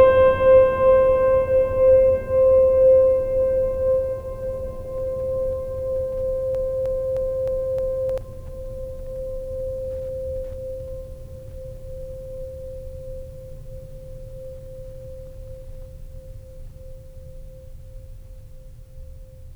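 At 6.55 s the music locks into a broken-record loop: a 0.31 s fragment plays five times back to back until 8.18 s, likely from a stalled stream resending its last buffer. Unlike an echo, each repeat is identical, with no decay.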